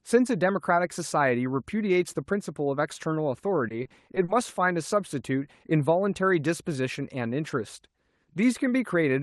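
Repeated packet loss (robotic sound) hits this speech clip from 3.68 to 4.29 s. Six gaps in that stretch, the longest about 40 ms, were each patched by extending the previous sound, so about 120 ms in total, a fifth of the span, is concealed rather than real. Those stretched fragments come out choppy and robotic, with bits missing. The call path itself, Opus at 32 kbps, carries the audio with a top end near 12 kHz.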